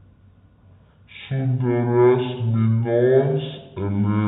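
From the first moment to the end, the speech runs at half speed and a full octave low, the classic sign of stereo read as mono: left and right samples got played back to back as one channel, with a faint mirrored image sitting up in the top half of the spectrum.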